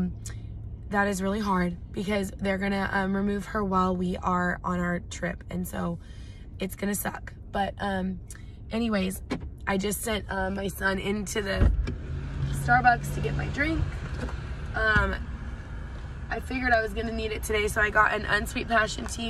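No technical fault can be heard anywhere in the recording.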